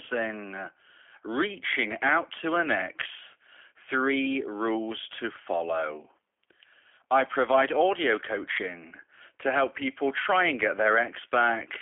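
G.729 codec damage runs from start to end of this speech. The sound is rebuilt from a vocal tract filter, pitch predictor and a few pulses per frame, at what sounds like 8 kbit/s. Nothing passes above 3.5 kHz, and the speech comes out rough and synthetic.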